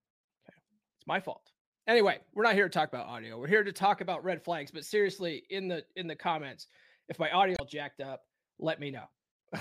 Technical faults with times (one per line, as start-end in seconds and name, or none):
0.64-0.69 damaged data in a compressed stream
7.54-7.60 damaged data in a compressed stream